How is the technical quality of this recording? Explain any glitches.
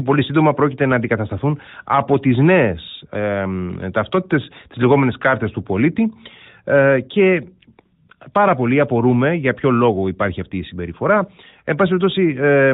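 No glitches can be heard anywhere in the recording, and the speech keeps a steady narrowband, phone-like character throughout, which fits an AMR-NB mobile codec running at its top rate of about 12.2 kbps.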